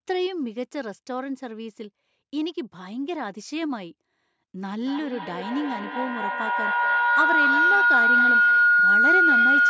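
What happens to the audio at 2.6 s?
Nothing goes wrong at 2.6 s: the speech continues intact through that moment, with only the normal call microphone processing audible, its high-pass filter trimming the lowest bass and nothing present above 8 kHz.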